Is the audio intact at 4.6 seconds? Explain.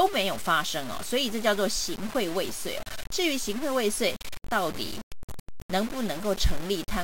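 No. Low bit depth without dither runs throughout, including 4.6 s: grainy, level-following distortion about 15 dB below the signal, likely from undithered truncation to roughly 5 bits.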